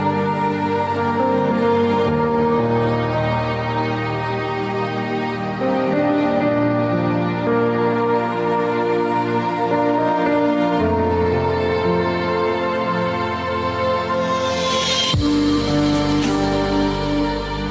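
Throughout the audio, the gain is pulled down on loud sounds, so the level seems to breathe, with a swing of around 10 dB. Loud and quiet moments sit unnaturally close together and the result sounds squashed. This is gain pumping, most likely caused by input gain set far too high for the microphone, with a fast limiter or compressor clamping down on each loud peak and releasing in the pauses. The call's microphone processing removes the lowest bass, and nothing is present above 8 kHz.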